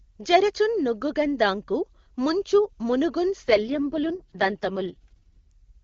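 Right after "దాఁకు ముంచు మునుగుం", from 3.43 to 5.52 s, there's an AMR rate drop: the speech turns rough and raspy, which fits HD Voice falling to its lowest mode.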